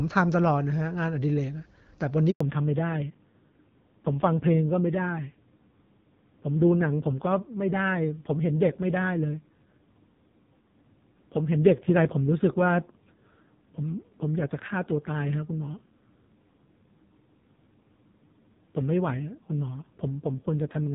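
At 2.31 s a handover gap cuts the sound for 100 ms, until 2.41 s, as the call switches networks and no frames arrive. The audio fades within tens of milliseconds to silence. On a waveform it is a flat line; on a spectrogram, a blank vertical strip.

From 2.41 s to the end, a fallback to narrowband replaces the clear wideband sound heard before the gap, which fits HD Voice near 12.65 kbit/s. Nothing remains above 4 kHz, and the sound turns dull and rough, consistent with a low-rate narrowband codec around 5.9 kbit/s. On a spectrogram, everything above 4 kHz goes empty.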